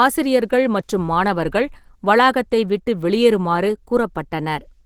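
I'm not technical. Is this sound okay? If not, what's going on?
No. From start to finish the speech sounds rough and a little hoarse, with a grainy, slightly muffled quality, as if the voice were pushed through a fine sieve. The likely cause is Opus compression, a common way of shrinking audio files. Squeezed this hard, it switches to a setting built for talking and fills in detail it can't afford with noise, which is what gives the voice that coarse texture.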